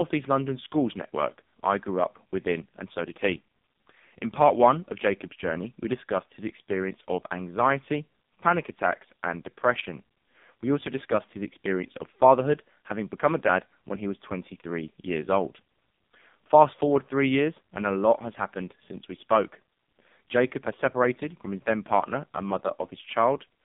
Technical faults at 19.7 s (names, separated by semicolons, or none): AMR narrowband mobile codec